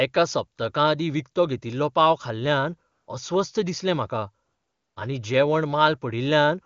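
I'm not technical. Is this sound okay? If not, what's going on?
No, not quite. There are two short gaps filled with AMR comfort noise: at 2.91 to 3.07 s, right after "विकतो घेतिल्लो पाव खाल्ल्यान", and at 4.45 to 4.95 s, just before "आनी जेवण". The phone briefly judged the speech as silence, stopped sending it, and played a smooth, fake hiss in its place.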